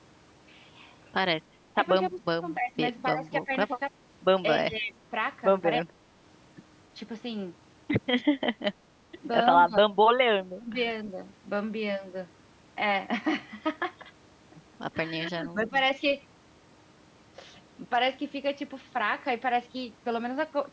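Around 1.73 to 3.93 s the speech keeps dipping, dropping about 25 dB in patches that total roughly 0.7 s. That's likely speech suppressed in double talk: the echo canceller couldn't separate this talker from the far side's loudspeaker audio, so it pulled everything down. The same thing happens at 4.59–4.96 s and 5.8–5.89 s, at 9.66–9.95 s, and at 10.52–10.77 s, where it dips about 20 to 25 dB and the voice thins out or drops briefly. At 11.05 s there's a faint echo leak, a delayed copy about 300 ms behind the voice and roughly 30 dB down. It's likely the far side's canceller letting some of its own speaker output back into its mic. Around 15.19–15.75 s the voice gets suppressed again, this time by about 15 dB, and at 15.6–15.69 s the same quiet 300 ms echo slips through. Throughout, the sound tops out around 8 kHz, which is just the call's normal microphone processing.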